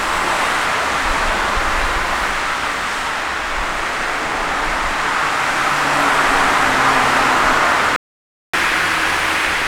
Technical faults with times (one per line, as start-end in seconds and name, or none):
7.96-8.53 playback stall
8.53-9.67 catch-up at higher speed